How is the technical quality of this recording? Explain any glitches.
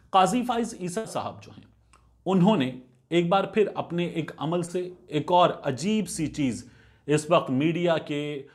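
Two packet-loss glitches disturb the recording.

At 0.97 to 1.05 s there is a burst of packet loss. About 70 ms of audio never arrived in time. The receiver stretched the last sound and faded it down. You hear a brief held buzz or hiss. Then the sound jumps ahead, with that stretch gone.

At 4.65 to 4.68 s there is a short concealed packet loss. Only 20 ms went missing. The decoder patched it by extending the preceding sound, then blended back in. It comes across as a quick smear or wobble, and a very short sound can disappear.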